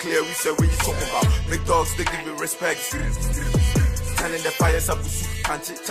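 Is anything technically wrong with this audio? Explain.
No, nothing in the audio points to a technical fault.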